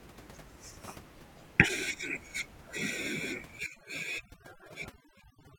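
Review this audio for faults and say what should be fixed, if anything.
Overdone noise removal runs from 3.59 s to the end at 5.59 s. The noise reducer cuts individual frequency bands hard wherever they sit near its noise estimate. The room noise, about 18 dB below the speech, collapses into near-silence with twinkling specks, and quiet speech components vanish with it. To prevent this, lower the noise reduction strength so a faint, steady noise floor remains rather than gating bands to silence.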